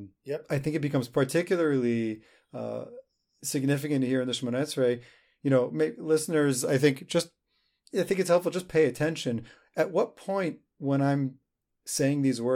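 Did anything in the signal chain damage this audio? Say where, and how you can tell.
No, nothing in the signal chain audibly damaged this speech.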